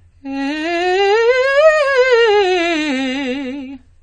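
Throughout the music, nothing sounds above 9 kHz. Sustained tones warble and smear. This is likely AAC compression at a low bitrate, about 32 kbps.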